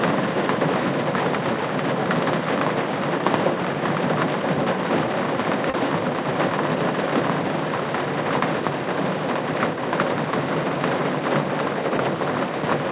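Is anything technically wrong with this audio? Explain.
Yes, two faults. The sound comes through a call path using G.711 A-law, with nothing above 4 kHz.

From 5.70 to 5.76 s there is a short stall from a late packet. The jitter buffer ran dry, so the last sound was stretched by 38 ms. Nothing is lost, but it hangs slightly.

From 10.56 to 10.78 s there is a jitter buffer speed-up. The buffer trimmed about 40 ms in short pitch-period pieces. The sound runs at 116% speed, hurried but unchanged in pitch.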